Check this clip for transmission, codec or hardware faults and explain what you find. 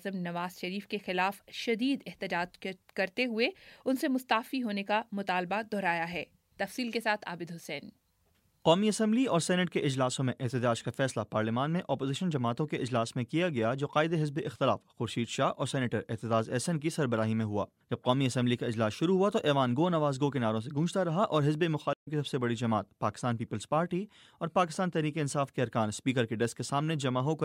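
There's one fault, a stream reconnect between 21.93 and 22.08 s. The connection dropped, so the player went quiet for about 80 ms, then reconnected and spun up a fresh decoder partway through the stream. When the sound comes back it has skipped ahead by a few tens of milliseconds, so you get a short gap followed by a small jump forward rather than a clean continuation of what was playing before the dropout.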